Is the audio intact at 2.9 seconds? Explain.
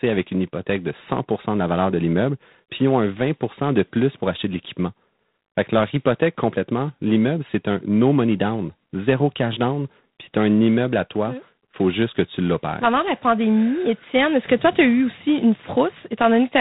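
No, not really. At 2.9 seconds, like the whole clip, the speech runs through G.726 ADPCM at 24 kbit/s. Each sample is coded as a coarse difference from a prediction, so a harsh, rasping hiss rides along with the voice level, and nothing above 3.9 kHz survives.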